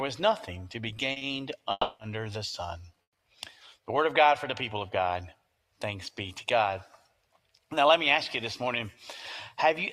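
Right at 1.12 s and again at 1.18 s there are two back-to-back short stalls from a late packet: the jitter buffer ran dry, so the last sound gets held for 40 ms, then 30 ms, before carrying on intact.

At 1.71 s comes a call audio freeze: about 280 ms of stretched, fading buzz with a brief drop to silence, then the audio picks up where it stopped. A second freeze at 3.03 s is shorter, about 120 ms, almost all of it silence. Both are likely packets held up in transit.

From 6.92 to 7.12 s the sound is cut by the noise suppressor, which mistook it for noise and pulled it down by up to about 11 dB.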